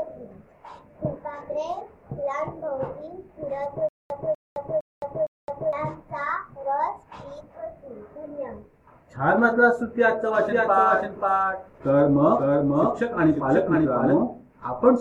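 Stutter with silent gaps runs from 3.89 to 5.73 s. A 246 ms fragment repeats four times, each followed by 215 ms of dead digital silence, so the burst returns every 460 ms. This likely comes from a stalled player replaying its last buffer, and the intervening audio is lost.

A doubled audio track appears from 10.48 to 14.22 s. A second, full-band copy trails about half a second behind, roughly 5 dB quieter, with no reverberant tail. It starts and stops abruptly, most likely because a slower capture path or an edit layered a second copy out of step.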